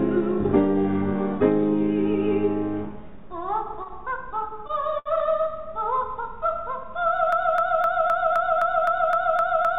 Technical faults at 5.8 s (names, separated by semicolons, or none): none